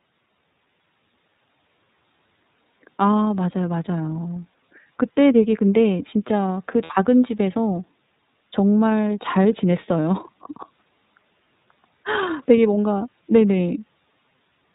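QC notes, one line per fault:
throughout, iLBC codec: narrowband sound with nothing above 4 kHz and a plainly rough, synthetic edge, which fits iLBC's 13.33 kbps mode with 30 ms frames.
4.53–4.56 s and 6.83–6.91 s, lost iLBC frames: 30 ms and 60 ms dropouts filled by a repeated pitch cycle plus noise, giving a brief buzzy held vowel before clean recovery.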